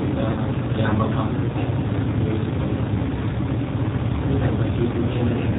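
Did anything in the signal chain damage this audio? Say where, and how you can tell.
Yes. The G.729 codec stage damages the whole clip. The speech sounds rough and synthetic, with nothing above 4 kHz, which fits 8 kbit/s coding.

VoIP packet loss concealed by the speech codec occurs at the network stage, from 0.31 to 0.40 s. About 60 ms went missing, likely three packets. The decoder stretched the last sound into a fading buzzy tone or coloured noise.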